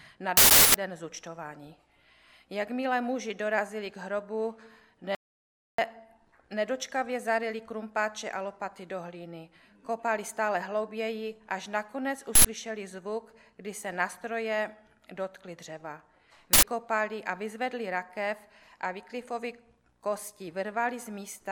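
At 5.15 s the audio drops out to silence and stays dead until 5.78 s, about 635 ms of silence with no room tone underneath. The input was likely lost briefly, a disconnect or stray mute, while recording carried on, so whatever happened then is simply gone.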